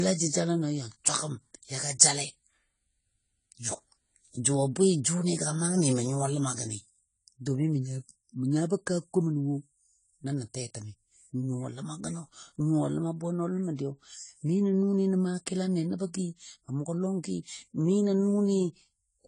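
From start to finish the speech sounds dull and smeared. Nothing reaches above 10 kHz, so the top octave is simply missing. Sibilants come out fizzy rather than crisp, and sustained sounds have a warble. The damage is plainly audible. The likely cause is AAC compression at a low bitrate, consistent with about 24 kbps AAC-LC. At that rate the encoder cuts off the treble and quantises the remaining bands coarsely, leaving gaps it patches with noise.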